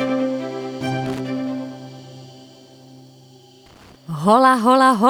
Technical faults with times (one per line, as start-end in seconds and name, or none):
1.06-1.20 loose connector crackle
3.66-3.96 loose connector crackle